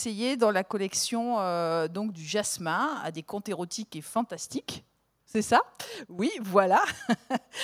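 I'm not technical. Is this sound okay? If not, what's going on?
Yes, nothing stood out as wrong when listening to this sound.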